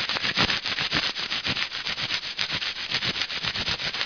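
Nothing stood out on listening to this recording of sounds.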